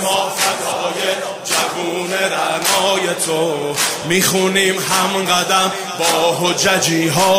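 Nothing stood out as a technical problem on listening.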